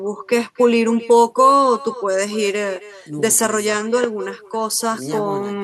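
From the very start and all the way through, there's echo with no canceller. The far end is evidently playing the call out of a loudspeaker, their mic catches it, and nothing strips it out, so the talker comes back to themselves after the network round trip. Every phrase gets shadowed roughly a third of a second later by a copy about 16 dB down, thinner than the original.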